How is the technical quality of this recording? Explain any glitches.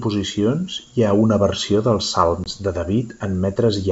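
One glitch stands out: a packet loss on an ADPCM call, heard in the speech at 2.44 to 2.51 s, just after "ha una versió dels". About 20 ms of audio, roughly one packet, drops out as an abrupt silent gap. Because ADPCM sends only differences from a running prediction, the decoder's predictor and step size drift out of sync with the sender's during the gap. The speech then resumes slightly distorted, and this clears within a few tens of milliseconds. The underlying G.722 wideband coding at 64 kbit/s keeps the speech clear up to 7 kHz, with at most faint upper-band hiss.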